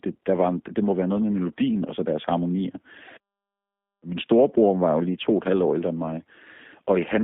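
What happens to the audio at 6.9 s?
At 6.9 s the speech is still passing through the G.729 codec, as it does for the whole clip. The codec does not send the waveform itself. It sends a few parameters per 10 ms frame: a vocal tract filter, a pitch predictor and a handful of pulses. This points to a low-rate VoIP link of about 8 kbit/s. The decoder rebuilds speech from those parameters inside a band of roughly 200 Hz to 3.6 kHz, so the sound is plainly rough, slightly synthetic and dull, with no low warmth or upper brightness.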